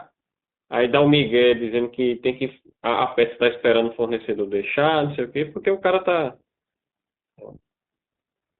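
Throughout the speech, the iLBC codec confines the sound to roughly 150 Hz to 3.7 kHz and gives it a rough, synthetic edge, consistent with iLBC's 15.2 kbps mode. Unlike a simple low-pass, the roughness itself is plainly audible.

Lost iLBC frames occur at 0.52–0.54 s and 5.88–5.91 s, about 20 ms each. The decoder fills each one with a brief, buzzy held pitch cycle, not silence or a click, and the speech recovers immediately afterwards.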